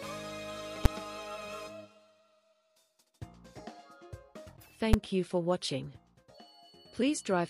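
At 0.85 s and again at 4.93 s, a calculation blows up into infinite or invalid numbers that clamp to the largest possible sample value, pinning the output flat at one extreme value, far beyond the audio's peaks, for about 5.8 ms. The length fits a 256-sample block, and each is heard as one sharp, very loud bang cutting through the sound.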